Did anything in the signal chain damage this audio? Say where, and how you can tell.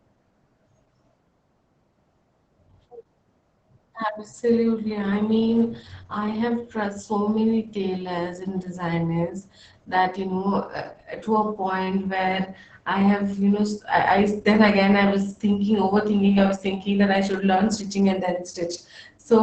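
Yes, at the codec stage. Opus voice compression: nothing above 8.7 kHz throughout, plus hoarse, robotic speech from coarse SILK excitation near 10 kbps, which a plain low-pass filter wouldn't cause.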